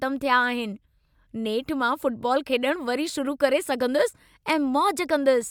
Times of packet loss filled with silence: none

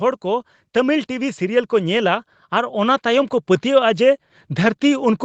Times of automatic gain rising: 0.21-5.25

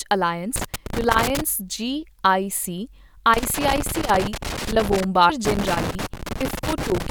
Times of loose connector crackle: 0.56-1.41, 3.34-5.04, 5.45-7.10

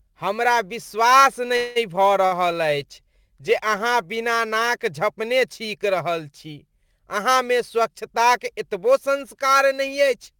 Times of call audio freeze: 1.57-1.78

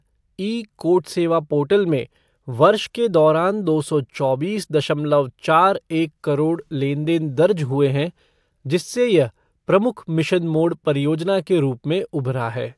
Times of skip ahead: none

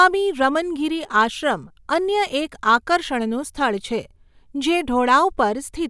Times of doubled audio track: none

